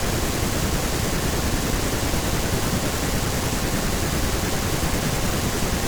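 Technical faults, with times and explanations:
No technical faults are present in this speech clip. Nothing in it points to a dropout, glitch or other playback or capture problem.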